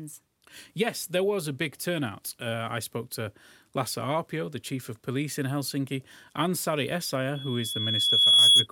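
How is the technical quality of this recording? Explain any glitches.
The recording is marred by one clear fault near the end. From 7.35 to 8.67 s there is a loudspeaker feedback squeal. The microphone is picking up a loudspeaker it feeds. At 3.4 kHz the loop gain rises above one, so that frequency keeps reinforcing itself. A single pure tone swells over about a second. It ends up roughly 15 dB louder than the speech, a piercing whistle.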